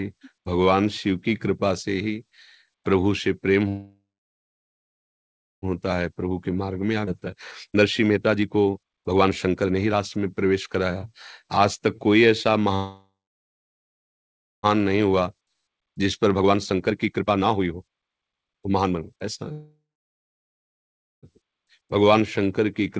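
Speech carried over a call path, which fits G.722 at 64 kbps with nothing above 8 kHz, stalls three times, most likely because packets were held up in transit and the jitter buffer ran dry. At 3.68–5.65 s, 12.75–14.66 s and 19.52–21.26 s the receiver extends the last sound into a fading buzz or hiss that drops to silence for roughly 1.4–1.6 s, then resumes where it left off. These call audio freezes insert gaps rather than losing anything. Each freeze leaves the jitter buffer holding too much once the late packets arrive, so it trims pitch-period slices repeatedly to catch up. This jitter buffer speed-up makes the audio run fast at unchanged pitch, sounding hurried: 121% from 5.90 to 12.69 s, 138% from 14.79 to 19.22 s, and a slight 106% from 21.41 s to the end. Within the first catch-up, about half a second is also dropped outright, a skip ahead at 7.06–7.10 s where playback jumps forward with almost no gap.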